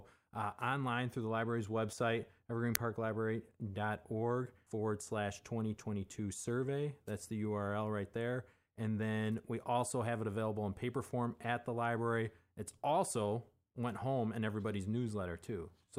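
At 2.75 s the speech is hit by a brief, loud crack, an uninitialised buffer. A block was played before audio was written into it, so leftover memory came out as samples. Its length of about 1.33 ms fits a 64-sample block. A dropout would not sound like this; this is a loud crack instead.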